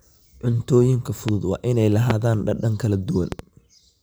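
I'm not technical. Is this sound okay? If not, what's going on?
No, there's a problem called a loud pop. You'll hear a sharp pop at 1.29 to 1.31 s, right before "waa inay", another at 2.10 to 2.13 s, just after "waa inay", and a quick double pop from 3.32 to 3.42 s, a bit softer. The speech carries on underneath. It's likely a sudden electrical jolt, such as a plug, switch or static spark, briefly jumping into the signal.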